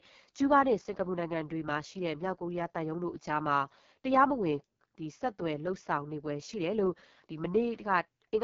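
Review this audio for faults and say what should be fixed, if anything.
Rough, raspy speech throughout, with a hiss-like sheen at the top and nothing above about 7.3 kHz: AMR wideband (HD Voice) codec damage, heavy enough to suggest the lowest 6.6 kbit/s mode, where the vocal-tract model starves for pulses and 6.4 to 7 kHz is filled with noise. Prevent it by running AMR-WB at 12.65 kbit/s or higher.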